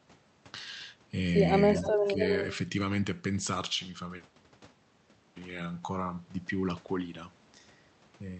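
From 1.74 to 2.58 s there is an echo leak: a distinct copy of the speech returns 284 ms late, only a little quieter, likely from a far-end echo canceller missing loudspeaker pickup. Unlike room reverb, it is a separate repeat rather than a smear. Within it, from 1.94 to 2.21 s, there is speech suppressed in double talk. The talker dips by around 10 dB for about a fifth of a second, likely because the canceller ducked both overlapping signals. Unlike a dropout, the dip follows the overlap and does not fall to silence.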